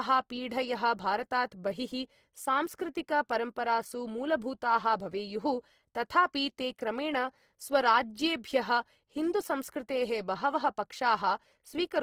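Throughout the speech, the sound is grainy and rough, with a noisy texture in the tonal parts. The likely cause is Opus compression in its music (CELT) mode at a low rate, which fits about 16 kbps. With too few bits, the encoder still keeps each band's energy, but fills the fine detail with noise or copies of lower bands. There are few gaps in the spectrum. The bandwidth stays full, reaching about 20.3 kHz.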